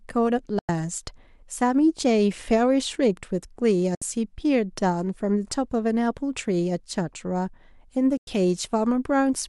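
At 0.59 s, 3.95 s and 8.17 s the speech drops out completely, a digital broadcast dropout each time: the receiver mutes when frames fail to arrive intact, then resumes mid-programme. The holes last about 0.1 s, 0.07 s and 0.1 s, which fits losing two or three frames of roughly 32 ms each. A fade of about 3 ms gives a near-instant cut. Waveform and spectrogram show sharp-edged, fully blank gaps across all frequencies.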